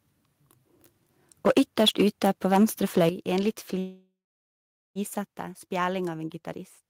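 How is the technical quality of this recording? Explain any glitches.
The recording has clear technical problems: recurring distortion on loud passages, three sudden level drops, and one long stall in the call audio.

Microphone overload, from 1.46 to 2.64 s and from 2.97 to 3.09 s: the input gain was likely set too high, so peaks exceeded the converter's limit by about 8 dB and then about 4 dB. Their tops are flattened, which gives the loudest moments a harsh, crackly edge.

Microphone volume stepped down, at 1.47 s, 3.09 s and 5.27 s: the call software likely found the microphone too loud or clipping and lowered the input gain in single steps of about 2, 8 and 4 dB. Each step makes the sound abruptly quieter. The last step falls just before "spjæling av".

Call audio freeze, from 3.79 to 4.98 s: packets were likely delayed and the jitter buffer ran dry. The receiver stretched the last sound, which fades out to roughly 0.82 s of silence. 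Playback then resumes where it stopped, so about 1.16 s of gap has been inserted and nothing is lost.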